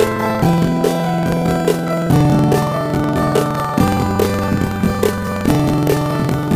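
From start to finish the sound plays an octave high with a steady flutter at about 21.5 Hz, yet the overall pace stays normal. This is planar audio read as interleaved. The stereo data is stored in blocks of 46.4 ms, which fits 2048 samples per block, with all left samples followed by all right samples, but it was read as alternating left-right pairs. Each block therefore plays twice at double speed, left then right, producing the octave jump and the block-rate flutter.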